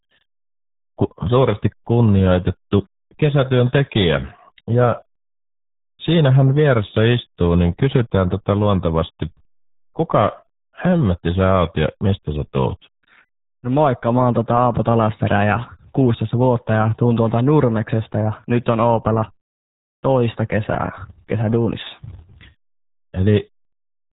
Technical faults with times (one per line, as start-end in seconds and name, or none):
0.00-24.19 RealAudio 14.4 codec